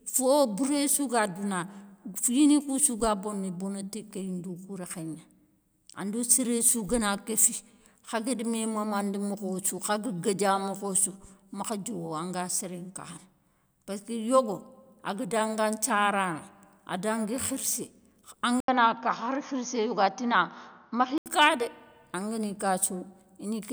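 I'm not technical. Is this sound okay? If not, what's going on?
No. From 18.60 s to 21.26 s, starting just before "ka dé angani", the speech turns dull and boxy, with nothing above 6.6 kHz, then clears again. This is most likely an input switched to a poorer device: the recording briefly took sound from another microphone or headset that passes a narrower range. A short gap of about 80 ms marks the switch. The loudness stays the same, and the new background noise is very faint.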